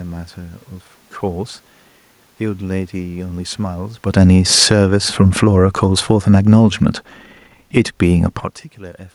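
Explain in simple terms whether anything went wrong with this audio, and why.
From 4.02 to 8.55 seconds the speech steadily fades, and the room noise behind it fades along with it. That is automatic gain falling: the system judged its input too loud or its background noise too strong, and gradually turned its own volume down, unlike a talker simply moving.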